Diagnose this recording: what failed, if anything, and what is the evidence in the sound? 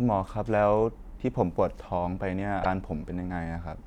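Damaged data in a compressed stream, from 2.60 to 2.66 s, at the codec stage: the speech breaks into a short glitch about 50 ms long. Corrupted bytes made the decoder misread those frames, lose sync, and hunt for the next valid frame header.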